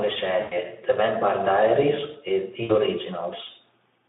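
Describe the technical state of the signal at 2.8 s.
At 2.8 s the audio sits near the end of VoIP packet loss concealed by the speech codec, spanning about 2.63 to 2.82 s. About 60 ms of packets went missing, which fits three 20 ms frames, and the decoder kept extrapolating its last pitch and filter while lowering the gain. The result is a stretched buzzy tone or coloured noise fading away rather than the silent hole of a plain dropout. It stays weak or distorted into the recovery, heard through the narrowband 200 Hz to 3.6 kHz Speex line.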